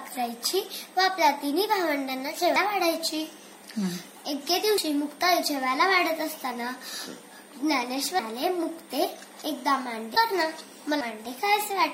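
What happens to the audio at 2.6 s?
At 2.56 s the sound jumps ahead, with no silence. Roughly 150 ms is missing. This is likely a dropped buffer from an overrun: the samples were overwritten before being read, and the two ends were joined. A faint switching supply whistle also runs under this moment. It sits between about 8.4 and 8.8 kHz, around 30 dB below the signal.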